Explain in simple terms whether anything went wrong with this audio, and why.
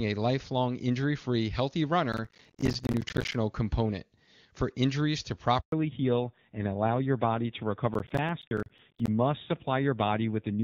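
Several things went wrong in this speech clip. The first is processor overload crackle, from 2.13 to 3.34 s and again from 7.94 to 9.08 s. The device was too busy to deliver each small slice of audio on time, and dozens of deadlines were missed in a row. Each miss left a brief silent hole, which fits slices of around 10 ms. Together these holes sound like gritty crackling over the speech, and it stops when the load eases.

At 5.60 s there is a handover gap. The phone switched the call to a different network, and no speech came through during the changeover. The sound drops out completely for 120 ms, until 5.72 s, and whatever was said in that moment is lost.

Right after that handover comes a fallback to narrowband. Until 5.72 s the call used HD Voice, which carries crisp high tones. From then to the end, the call runs on an older, lower-quality phone codec that removes everything above 4 kHz. 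The speech turns duller, more muffled and rougher.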